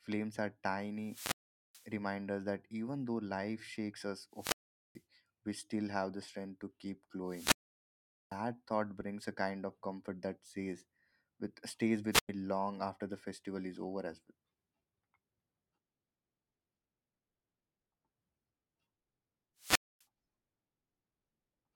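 Wireless microphone squelch dropouts at 0.98, 4.32, 7.25, 12.11 and 19.58 s: each time the radio link fades, hiss rises briefly, then the receiver mutes for 0.1 to 0.8 s before the speech returns.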